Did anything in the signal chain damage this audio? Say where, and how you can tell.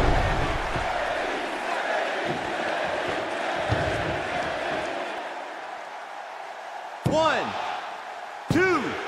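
Yes. At 5.18 s there is a single brief disturbance, the kind of chirp, squawk, click or short hole that does not belong to the surrounding sound. This points to damaged data in a compressed stream, a fault at the codec or storage stage: a stretch of the encoded bitstream was corrupted, so the decoder misread those frames, lost sync and resynchronised on the next valid frame header. A buffer underrun would instead leave a gap of silence or a repeated block rather than this kind of decoder glitch.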